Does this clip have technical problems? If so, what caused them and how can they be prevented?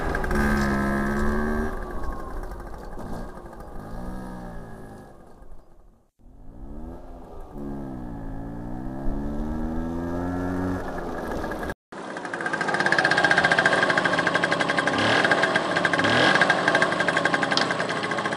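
Yes. At 11.72 s the sound drops out for 200 ms, then returns about 10 dB quieter, with nothing above 10.5 kHz and a new noise floor about 30 dB below the signal through to the end. This is likely an input switched to a poorer device. A bandwidth-only change would not bring a silent gap, level jump and different noise together. Prevent it by locking the recording input to one microphone and disabling automatic device switching.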